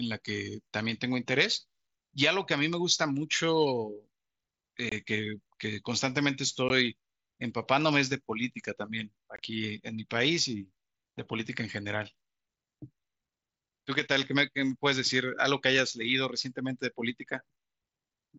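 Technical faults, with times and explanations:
4.89–4.92 s, 6.69 s and 9.36–9.39 s: unconcealed Bluetooth headset packet loss. Short gaps of about 22, 15 and 22 ms with abrupt edges cut into the speech, consistent with two or three lost headset packets each going uncovered instead of being masked, over an mSBC wideband link.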